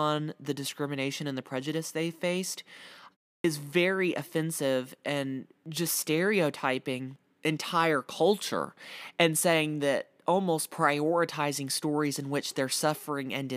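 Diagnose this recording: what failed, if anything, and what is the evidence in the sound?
Clipped start after a pause at 3.40 to 3.44 s, a playback-stage fault in the output device. After a pause of about 0.32 s, the sound resumes abruptly out of silence at "is very offensive and", with its opening sounds missing. Roughly 43 ms is swallowed. The output device has gone idle during the short silence and needs that time to wake or relock its clock. The audio arriving in the meantime never reaches the speaker, so the onset is cut.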